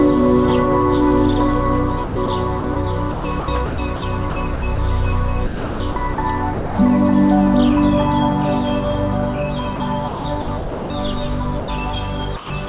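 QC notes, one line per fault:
2.04–4.78 s, 5.46–6.78 s and 9.76–10.90 s: sound chopped by the voice detector. Within these stretches, about 0.74 s, 0.66 s and 0.58 s of sound are swapped for comfort noise. The audio turns choppy, likely because the sender's detector kept toggling transmission.
11.60–11.68 s and 12.36–12.50 s: sound dropped by the voice detector. For 80 ms and then 140 ms the sound gives way to steady comfort noise before returning, likely because the sender's detector mistook quiet sound for background and paused sending. Across these gaps the narrowband call path shows nothing above 4 kHz.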